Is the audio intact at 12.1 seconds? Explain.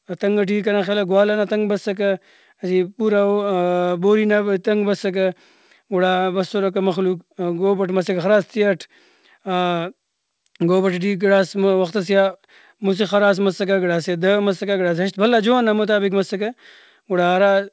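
Yes, the audio is intact at 12.1 seconds, with only the expected character of the G.722 call path, which carries nothing above 8 kHz.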